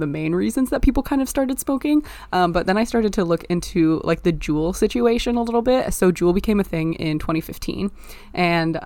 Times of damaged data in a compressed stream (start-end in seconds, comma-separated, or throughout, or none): none